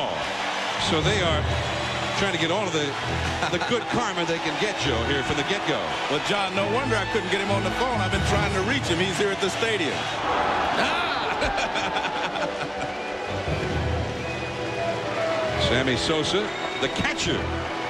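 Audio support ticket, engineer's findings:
No audible faults found on listening; no dropouts, timing or level anomalies observed, and no component implicated.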